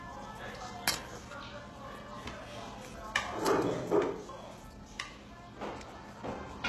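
Throughout the clip the treble sounds gritty and metallic, ending in a hard ceiling near 12.3 kHz. This is likely HE-AAC compression at a very low bitrate, around 16 kbps, where the upper band is rebuilt from copied lower bands instead of coded directly.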